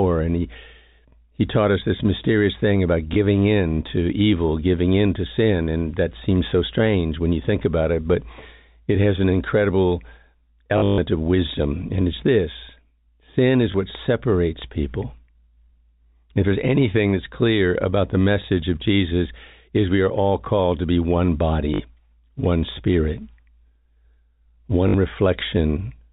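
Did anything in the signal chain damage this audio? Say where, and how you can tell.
Yes. Brief robotic stutters at 10.78–10.98 s, 21.74–21.80 s and 24.88–24.94 s, with small blips at 3.14 s and 13.72 s, point to network packet loss with the last packet repeated. The longest run, about 140 ms within the 10.78 s event just before "of wisdom", buzzes near 50 Hz, which fits 20 ms packets being replayed.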